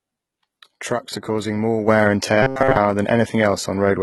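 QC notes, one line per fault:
throughout, HE-AAC compression: The treble sounds synthetic and gritty, with s sounds turning lispy and metallic. This is likely HE-AAC at heavy compression, fitting a bitrate near 16 kbps. Only the lower band is truly coded, and the upper band is patched in by copying lower harmonics upward, so they no longer line up. A spectrogram shows repeated, smeared texture above the crossover.
1.88 to 4.02 s, sudden gain jump: Right after "are causing more", the level steps up by about 6 dB in a single sample and stays there to the end of the clip. The sound and the background noise rise together, which likely points to a digital gain change applied with no ramp. The waveform envelope jumps abruptly at 1.88 s, and a spectrogram shows a vertical edge where the noise floor brightens across all frequencies at once.
2.43 to 2.79 s, robotic sound from repeated short buffers: The sound becomes a rigid, metallic buzz at 133 Hz that loosely follows the speech. 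Most of this stretch is made of a short chunk of about 7.5 ms replayed over and over, likely because new audio arrived too slowly while the real signal was skipped. The waveform shows a roughly repeating short cycle tiling the span, and a spectrogram shows evenly spaced horizontal harmonics of 133 Hz that don't glide.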